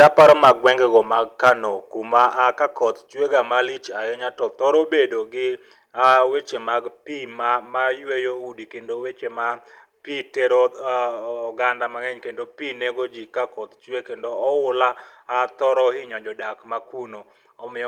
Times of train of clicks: none

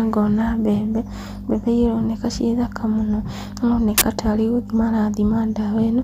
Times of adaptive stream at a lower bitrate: none

